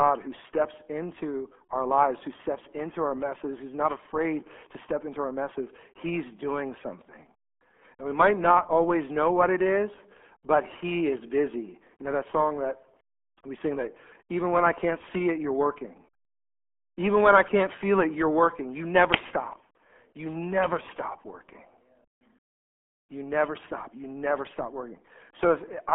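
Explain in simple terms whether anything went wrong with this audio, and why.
Muffled, gargly speech runs from start to finish, as if heard down an old phone line. It comes from the RealAudio 14.4 codec, built for dial-up modems, which squeezed the sound hard and discarded everything above about 3.6 kHz, losing the crisp detail.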